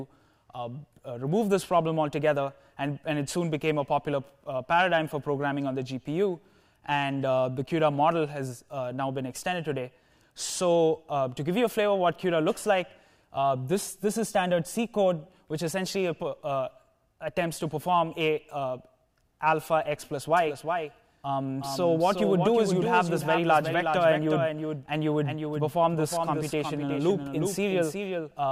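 A slower capture path likely doubles the audio track from 20.37 s onward: a dry copy trails about 400 ms behind, about 5 dB quieter.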